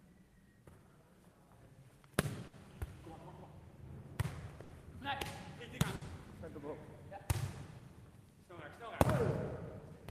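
Everyday sounds with a burst of packet loss at 2.47, 4.63 and 5.95 s. Each time, the last sound is held and faded for 60 ms, then 60 ms is skipped.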